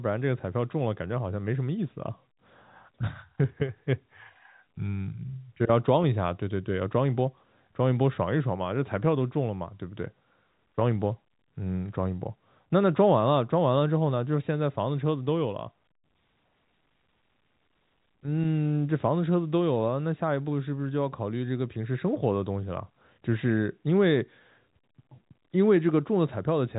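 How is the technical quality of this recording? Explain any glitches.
No glitches or faults heard.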